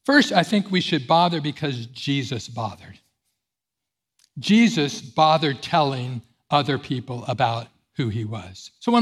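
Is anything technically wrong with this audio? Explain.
No, nothing technically wrong can be heard in this speech recording. There is no fault here that calls for explanation.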